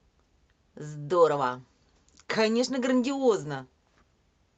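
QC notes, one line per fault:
No technical faults are audible in the speech; the signal holds steady level and continuity throughout.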